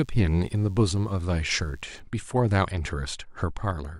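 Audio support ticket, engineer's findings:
Thin, steady buzz under the speech from 0.0 to 2.0 s, faint, well below the voice level. Classic DECT cordless phone buzz: handset or base nearby bursting every 10 ms, audio stage rectifying it, so 100 Hz with a stack of harmonics. Check for nearby DECT kit.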